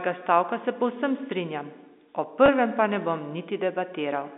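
A brief buzzy hold at 2.46 to 2.48 s interrupts the speech, as if the voice sticks on one pitch for an instant. That is packet loss with pitch repetition: about 20 ms of audio, likely one packet, went missing, and the receiver filled the gap by repeating the last pitch period. The telephone band of roughly 250 Hz to 3.7 kHz fits a telephone line carried with G.711 A-law coding, which passes nothing above 4 kHz.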